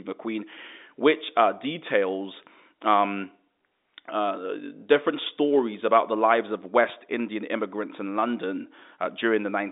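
No technical faults can be heard in this speech.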